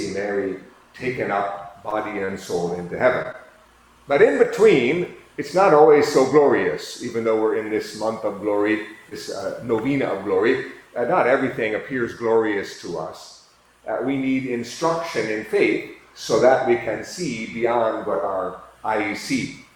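At 1.89 to 1.93 s there is a short concealed packet loss. About 20 ms of audio never arrived in time. The receiver covered the hole by carrying the last sound forward for about 19 ms, then blended back into the real signal. The result is a brief smear or wobble. A very short sound inside that window may be lost.

At 2.25 to 2.30 s comes a short stall from a late packet. Nothing is missing here. The packet was late, the jitter buffer ran dry, and the receiver stretched the last sound by about 31 ms until the packet arrived. Playback then resumed from the same point, about 31 ms behind where it was. It sounds like a sound held slightly too long, with a faint buzz or dip.

From 3.22 to 3.70 s there is repeated packet loss, the kind that gives a robotic sound. Four short gaps fall close together in this half-second. The longest is about 18 ms, and about 40 ms of audio is missing in total. Each gap is patched by extending the last sound, roughly 38 ms of fill in all. 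That fill covers about 8 percent of the stretch. The sound turns choppy, with small pieces gone.

At 9.09 to 9.13 s a second short concealed packet loss repeats the first. About 20 ms is lost and about 18 ms is filled. It gives the same brief smear.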